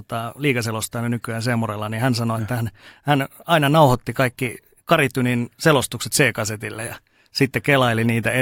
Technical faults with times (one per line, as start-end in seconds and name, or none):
none